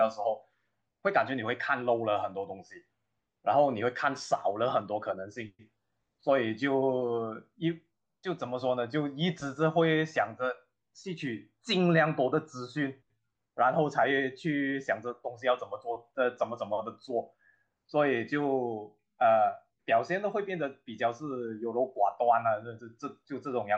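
At 2.44 s and again at 11.27 s the speech carries a single sharp click, each a thin vertical line in the spectrum with no gap in the sound around it. Both are likely dropped samples, where only a couple of samples, a tiny fraction of a millisecond, went missing from the stream. The waveform steps abruptly from one value to a later one, and that discontinuity is what produces the click.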